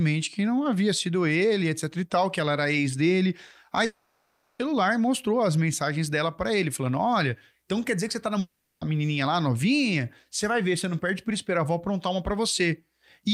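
At 3.85 s the sound breaks off and is replaced by a smeared, buzzy continuation of what came just before. It fades but never drops to silence, and it lasts about 0.74 s until 4.61 s. The audio then resumes, with that stretch simply missing. The same thing happens from 8.39 s to 8.83 s, for about 0.42 s. This is likely a long network dropout, with the receiver filling the gap by extending the last sound it had.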